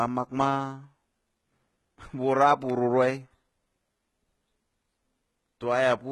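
A speech recording carries heavy codec damage throughout: the treble above the midrange sounds synthetic and gritty, with sibilants turning metallic and lispy and nothing at all above 11.8 kHz. The likely cause is HE-AAC compression at a very low bitrate, consistent with roughly 16 kbps, where spectral band replication rebuilds the highs from copied lower bands. That copied, misaligned treble distinguishes it from plain low-pass dullness. At 2.70 s a single sharp snap sits on top of the speech. It is likely an electrical switching spike picked up on the line, and its added, instantaneous arc shape sets it apart from a dropout or an edit click.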